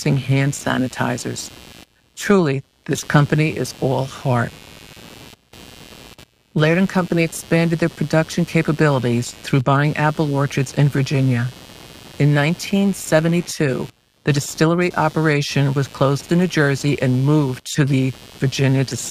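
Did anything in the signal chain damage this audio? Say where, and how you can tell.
Yes, in the analogue wiring: computer activity noise runs through the whole speech clip. A buzzy, chirping layer pulses around 100 times a second, roughly 25 dB below the speech, and it keeps going in the pauses. Changing load in the computer pulls the shared ground that the audio circuit references. On a spectrogram it shows as a comb of harmonics about 100 Hz apart that is present between phrases, and the waveform baseline never settles to silence.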